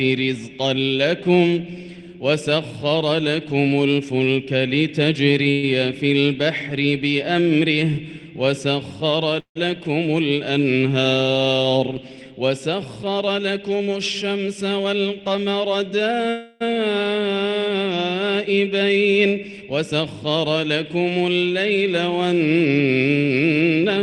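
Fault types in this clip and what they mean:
Call audio freeze: at 5.51, 9.40 and 16.30 s the sound hangs as a fading buzz or hiss, the second dipping into silence, likely from late packets draining the buffer.
Jitter buffer speed-up: the receiver trims tiny pitch-period slices to catch up, so 13.2–14.9 s, 18.5–20.2 s and 23.4–24.0 s run about 7–10% fast, same pitch.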